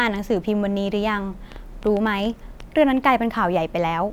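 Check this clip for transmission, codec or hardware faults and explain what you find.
A train of clicks runs from 1.52 to 2.61 s: about seven similar pulses at roughly 6.5 per second, spaced unevenly, peaking around 5 dB above the speech. The likely cause is interference from nearby equipment or a faulty connection or power supply. It sounds like irregular ticking over the speech.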